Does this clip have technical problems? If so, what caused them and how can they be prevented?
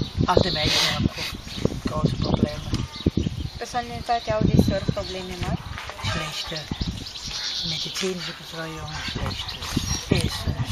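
No, nothing technical goes wrong anywhere in this one, so there's nothing to track down or guard against.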